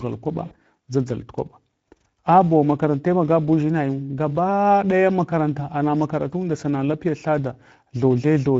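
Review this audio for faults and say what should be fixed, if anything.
Speex codec damage runs through the whole speech clip and is plainly audible: the voice sounds noisy and hoarse because the CELP coder has too few bits to model the excitation. The roughness suggests a setting around 16.8 kbps. On a spectrogram, the harmonic stripes look blurred and grainy, with noise filling the gaps between them. The waveform looks rough rather than cleanly periodic. To prevent this, encode at a higher Speex quality setting or switch to a modern codec such as Opus.

VoIP packet loss concealed by the speech codec occurs from 0.45 to 0.57 s. About 60 ms of audio was lost, which fits three missing 20 ms frames. The decoder filled the gap by repeating its last pitch and filter with falling gain, so the sound is briefly stretched and fades. Because each frame builds on the previous one, the sound stays weak or distorted just after 0.57 s. 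On a spectrogram, the harmonics freeze into flat horizontal lines that dim. The waveform shows a smoothly decaying, overly regular stretch. To prevent this, use a jitter buffer with forward error correction or redundancy on the network path.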